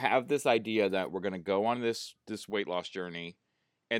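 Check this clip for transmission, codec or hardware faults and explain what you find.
One fault is audible. From 2.5 s to the end, the speech abruptly turns duller and slightly quieter, losing everything above 9.4 kHz and gaining a faint new noise floor, with no gap at the change. This is likely an input switched to a poorer device, one with a narrower band and its own background noise.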